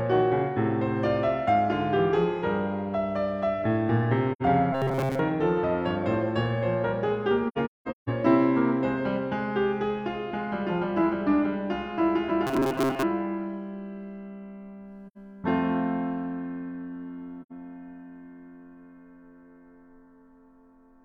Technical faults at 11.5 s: none

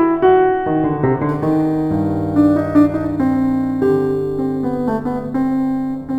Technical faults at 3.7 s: crude rate conversion

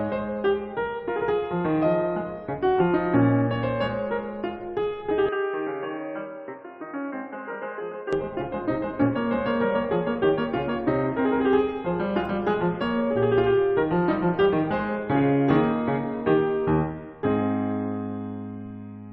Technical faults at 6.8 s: input switched to a poorer device

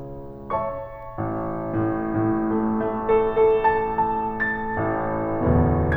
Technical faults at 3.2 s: none

